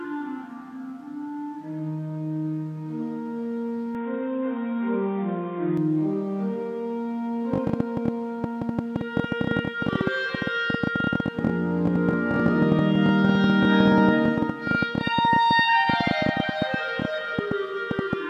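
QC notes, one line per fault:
3.95–5.77 s, input switched to a poorer device: the sound abruptly turns dull and boxy with nothing above 3.8 kHz and a faint new noise floor, with no gap and little change in level, then clears again. This likely comes from capture moving to a narrower-band microphone or headset profile.
7.54–18.14 s, train of clicks: sharp, similar-shaped ticks pop over the sound and through pauses at about 11.8 per second, unevenly spaced, around 150 in total and peaking roughly 15 dB above the sound. This likely comes from interference from nearby equipment or a faulty connection or power supply.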